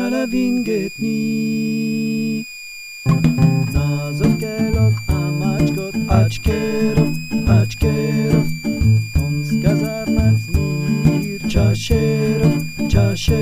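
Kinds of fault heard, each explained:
Switching supply whistle: a switching power supply running in an audible burst mode, or beating against another supply, leaks its switching tone into the audio path. Here it is a high whistle present for the whole clip, wandering between about 2.33 kHz and 2.53 kHz as the supply's operating point shifts. It sits roughly 15 dB below the wanted sound throughout.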